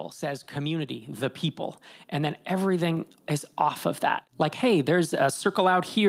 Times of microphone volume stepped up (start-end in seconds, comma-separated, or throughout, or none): 1.02, 2.97